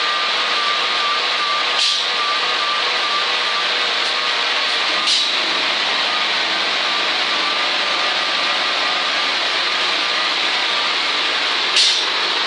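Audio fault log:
Nothing to log here; I listened all the way through and didn't catch anything that called for a line.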